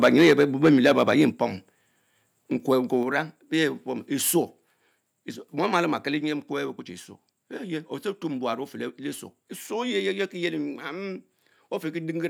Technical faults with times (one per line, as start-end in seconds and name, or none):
0.02-1.23 microphone overload
0.31 microphone volume stepped down
1.32 microphone volume stepped down
5.76-5.80 microphone overload